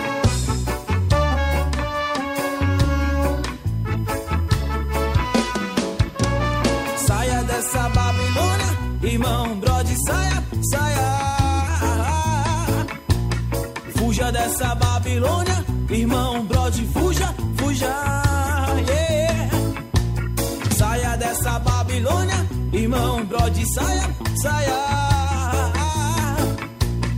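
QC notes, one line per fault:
Throughout: USB whine, a steady fixed-pitch tone at 1 kHz sitting roughly 30 dB below the audio. The 1 ms USB frame rate drags current through shared power or ground, and that periodic load leaks into the analogue path as an audible whine.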